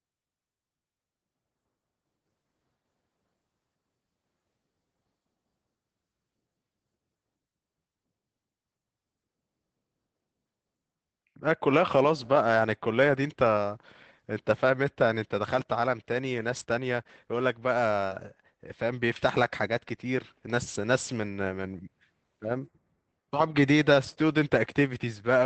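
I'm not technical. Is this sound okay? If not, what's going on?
No. There are a few brief rough spots in the speech, caused by bits of the call going missing on the way.

At 12.23–12.25 s, 16.55–16.61 s and 18.11–18.17 s the speech turns momentarily grainy and noisy. That is a lost packet rebuilt from error correction. Small chunks of audio were lost, but the next chunk carried a cruder backup copy, which was played instead, so nothing drops out.

Just before that, at 18.07–18.13 s, there is a tiny smear or wobble. That is a short concealed packet loss. A few hundredths of a second arrived too late, and the receiver covered the hole by stretching out the sound just before it, then blended back in.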